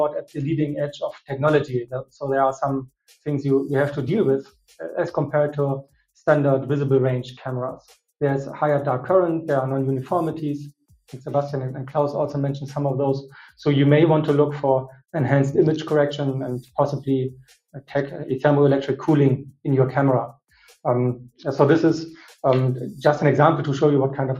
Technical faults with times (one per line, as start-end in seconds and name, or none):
0.00-24.39 noise suppressor applied to music or sounds
0.17-3.27 sound cut by the noise suppressor
4.43-4.74 sound cut by the noise suppressor
5.83-6.01 sound cut by the noise suppressor
16.62-17.92 sound cut by the noise suppressor
19.44-21.43 sound cut by the noise suppressor